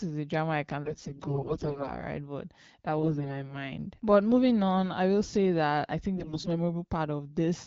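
From 0.84 to 2.00 s, right after "a drama I can", again at 2.98 to 3.59 s, and at 6.16 to 6.49 s after "say that I think", AMR bit errors flip weakly protected frame bits, so the speech keeps pitch and level but turns hoarse and gargly. The first burst is the roughest.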